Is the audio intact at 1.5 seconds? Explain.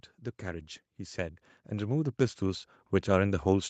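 No. At 1.5 seconds the speech is partway through an automatic gain rising fault that runs from 0.42 s to the end of the clip at 3.7 s. The gain control judged the input too quiet and keeps turning it up, so the voice and the background swell together. On the waveform the envelope widens steadily across that span. On a spectrogram every band, up to the 8 kHz ceiling of the call path, brightens in step, including the gaps between phrases.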